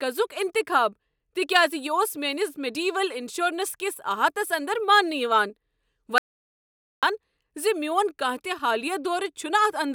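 At 6.18 s the speech cuts off abruptly and the track falls into silence, with no room tone or background hiss, until the sound resumes mid-flow at 7.03 s. This is an audio dropout to silence lasting about 0.85 s, and whatever was said in that span is simply missing. The likely cause is a brief loss of the input signal, such as a momentary disconnection or mute, while recording carried on writing silence.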